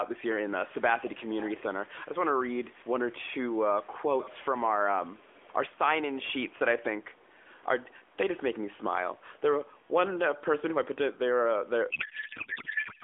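From 3.51 to 4.40 s, and again from 5.07 to 5.43 s, a faint second copy of the speech trails the original by about 387 ms. This is an echo leak, likely a far-end loudspeaker whose echo canceller let part of the microphone pickup return. The first stretch sits roughly 20 dB below the speech, and the second is fainter, around 30 dB down. On a spectrogram, a weak ghost of the harmonic and formant pattern appears shifted about 0.39 s later.

From 11.9 s to the end, the speech turns into garbled, warbling noise that barely follows the original. This is a codec payload misread: octet-aligned AMR frames are being decoded as bandwidth-efficient, so every field is read from the wrong bit positions. The spectrogram loses its clean harmonics and shows smeared, noise-like energy, still within the narrow telephone band. The waveform envelope barely tracks the syllables.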